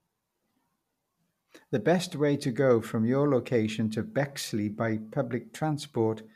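No technical faults can be heard anywhere in the speech recording.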